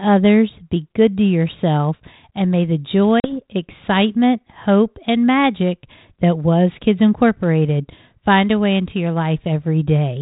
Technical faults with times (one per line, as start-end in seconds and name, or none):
3.20-3.36 packet loss on an ADPCM call